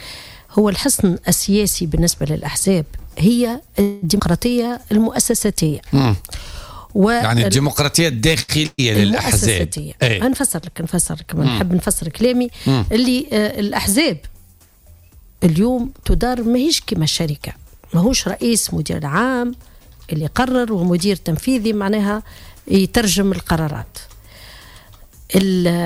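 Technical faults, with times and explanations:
3.81–4.04 s, call audio freeze: the sound stretches into a fading buzz or hiss for about 208 ms, likely packets held up until the jitter buffer ran dry, then picks up where it stopped.
4.18 s, skip ahead: playback jumps forward, dropping roughly a tenth of a second with only a tiny bridge, so the join feels abrupt.
4.54–5.06 s, jitter buffer slow-down: runs at about 90% speed, same pitch, as repeated pitch periods add 61 ms to rebuild the buffer's reserve.
8.42–8.50 s, short stall from a late packet: one sound hangs on about 59 ms too long while a packet arrives late, then continues with nothing lost.
8.66–8.80 s, burst of packet loss: 120 ms goes missing, covered by a decaying continuation of the last sound that ends in a brief 10 ms silence before it resumes further on.
17.32–21.29 s, jitter buffer speed-up: the sound hurries along at about 106% speed, pitch unchanged, as short pieces of one or a few pitch periods are trimmed, cutting roughly 200 ms of delay.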